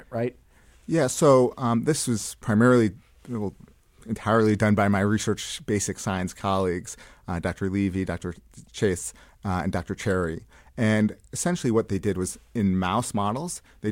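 No technical faults can be heard anywhere in this speech recording.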